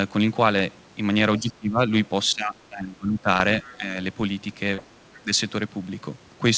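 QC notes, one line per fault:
1.39–1.80 s, 2.32–3.27 s, 3.62–3.94 s, 5.22–5.31 s, speech suppressed in double talk: the talker's level dips, by up to about 20 dB in the first two spans, around 5 dB at 3.62 s and about 15 dB at 5.22 s, with parts thinning or cutting out. This is likely the echo canceller's suppressor clamping down while far-end audio was also present.
3.38–3.42 s and 4.74–4.80 s, short concealed packet loss: 20 ms and then 40 ms of audio never arrived. The decoder bridged each gap by extending the preceding sound, which is heard as a brief smear or wobble before the signal blends back to normal.
3.64–3.71 s, other side's voice leaking through: a faint second voice, roughly 25 dB below the talker, surfaces for about 70 ms. It is likely far-end loudspeaker output that the echo canceller left uncancelled, and it coincides with the shallow suppression dip.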